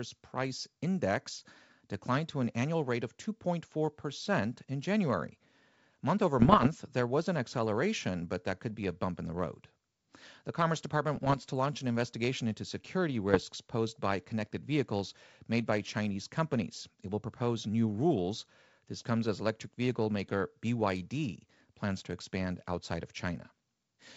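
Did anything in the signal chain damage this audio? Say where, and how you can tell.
Yes, bit errors on an ADPCM link, at 6.40–6.69 s before "there was an acceleration", at 11.16–11.37 s, and at 13.30–13.44 s. The errors corrupt the decoder's step size and predictor, producing pops and rough bursts that show as broadband vertical streaks and brief level jumps in the waveform.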